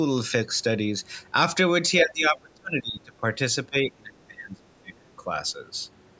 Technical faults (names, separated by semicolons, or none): speech suppressed in double talk